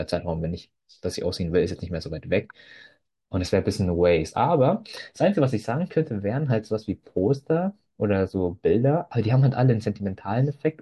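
No technical faults are audible anywhere in this speech recording.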